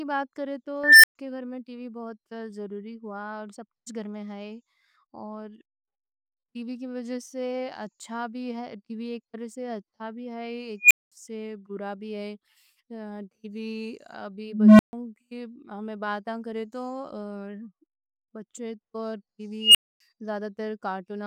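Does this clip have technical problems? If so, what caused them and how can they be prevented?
Yes. At 0.84, 10.80, 14.44 and 19.60 s a tone (around 2 kHz twice, then around 200 Hz and around 3 kHz) swells into a clipped squeal over 0.1 to 0.36 s. It then drops into 0.12 to 0.26 s of silence. This is an unstable filter: bad coefficients let its recursive feedback grow without bound until the numbers overflow and the filter resets. Checking that coefficients keep every pole inside the unit circle before they are applied prevents it.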